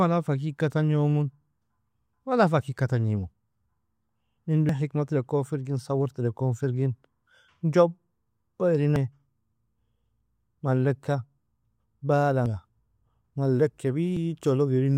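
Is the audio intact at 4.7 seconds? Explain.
No. At 4.69 s the speech jumps ahead with no gap, roughly 150 ms lost, likely a dropped buffer (overrun) overwritten before the program collected it.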